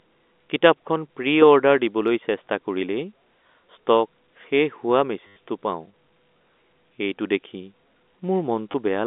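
At 5.27 s the speech breaks into a short robotic stutter lasting about 90 ms, to 5.36 s. This is packet loss with the last packet repeated. Packets went missing and the receiver kept replaying the last good one. The run buzzes at about 100 Hz, which fits 10 ms packets. A second, briefer stutter of 20 ms sits at 8.72 to 8.74 s, through the narrow telephone band of the G.711 line.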